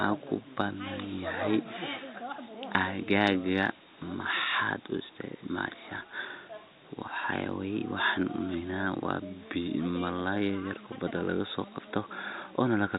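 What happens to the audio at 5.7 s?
Nothing goes wrong at 5.7 s; the speech runs through that moment intact, with no dropout, click or distortion.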